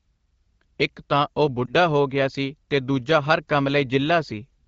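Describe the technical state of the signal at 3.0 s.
At 3.0 s the speech signal is intact, with no fault present at that moment.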